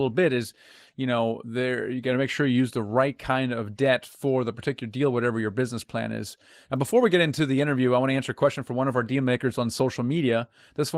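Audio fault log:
No faults detected.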